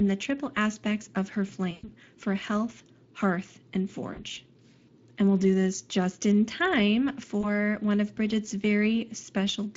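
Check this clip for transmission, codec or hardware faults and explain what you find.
Two faults are present: the speech runs through the Speex codec for its whole length, and it has three dropouts patched over by the decoder's packet loss concealment.

Speex codec, throughout: The CELP coder has too few bits to model the excitation accurately, which points to a middle setting of around 20 kbps. The codec damage is plainly audible as a hoarse, noisy grain laid over the speech throughout.

VoIP packet loss concealed by the speech codec, at 1.71 to 1.90 s, 4.13 to 4.24 s and 7.41 to 7.51 s: Packets went missing, so the decoder extended its last pitch and filter while steadily lowering the gain. The longest gap fits six lost 20 ms frames and is heard as a stretched, fading smear. The shorter gaps of 40 ms and 20 ms leave briefer blurred patches, and the speech stays weakened for a short while after each one.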